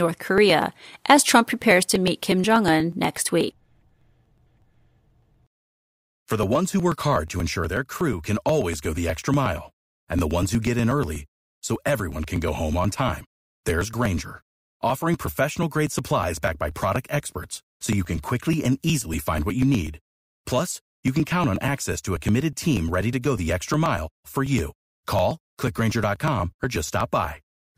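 Speech with periodic USB or driver dropouts from 0.14 to 27.73 s: every 0.121 s a few milliseconds are skipped, giving regular ticks and evenly spaced thin vertical lines on a spectrogram.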